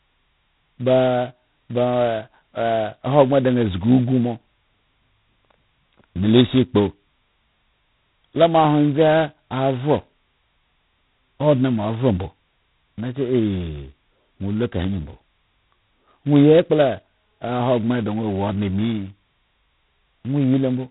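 Right from the start and across the whole speech clip there's G.726 ADPCM damage, and it's heavy. With only two bits coding each sample's prediction error, a rasping hiss rides on the voice and swells with it, which fits the 16 kbit/s mode. Everything above 3.9 kHz is gone.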